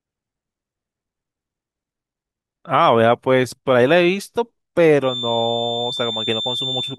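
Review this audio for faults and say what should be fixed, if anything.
From 4.99 s to the end, a 3.6 kHz feedback whistle wavers roughly 10 dB under the speech without swelling into a howl, likely from loudspeaker-to-microphone spill. Keep the microphone away from or behind the loudspeakers, lower monitor gain, or notch 3.6 kHz in the monitor feed.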